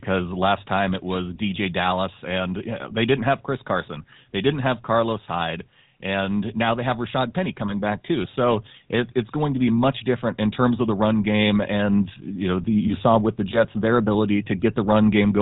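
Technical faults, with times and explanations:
Throughout: GSM full-rate codec. The speech is band-limited with nothing above 4 kHz, and it has a buzzy, gravelly roughness. The codec models the vocal tract and excites it with a sparse, regularly spaced pulse train. That coarse excitation, at a rate fitting 13 kbps, leaves plainly audible damage.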